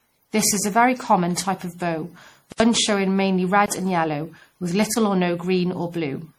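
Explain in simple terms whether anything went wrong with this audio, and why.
Two things went wrong.

The whole recording sounds swirly, smeared and hollow. The start of each sound is blurred instead of crisp. This is generation loss. The likely cause is that the speech was saved as an MP3 and then re-saved many times, perhaps around seven. Each save throws away a little more detail in a slightly different place, so the damage piles up. The result is worse than a single save would cause.

There are also three blocks of digital silence. From 2.52 to 2.60 s, right after "common type of bow" and before "showing mainly", the sound drops out completely for 80 ms. That is a short, clear hole. Two briefer dropouts of 20 ms each come at 3.66 to 3.68 s, just after "showing mainly", and at 4.94 to 4.96 s, just after "and yellow with". These are shorter holes. Each time, the audio stops dead and restarts with no fade. 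This usually happens when the playback or recording software fails to deliver sound in time and fills the gap with nothing.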